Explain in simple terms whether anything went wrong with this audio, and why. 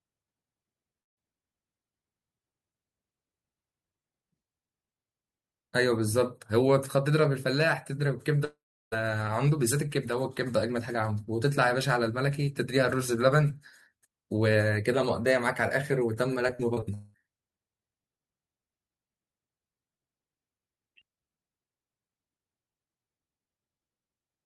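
Yes, things went wrong in four places. At 1.01 to 1.19 s, 8.45 to 8.94 s and 16.94 to 17.16 s the speech briefly turns into a fading buzz or drops to silence, then resumes with a piece missing. This is likely a long network dropout: the audio stopped arriving, and the receiver stretched the last sound before giving up.

From 16.48 to 16.84 s the speech turns choppy and robotic, with five quick holes, the longest about 37 ms, patched over for roughly a quarter of that stretch. That is repeated packet loss (robotic sound): audio kept going missing, and each hole was filled by repeating what came just before.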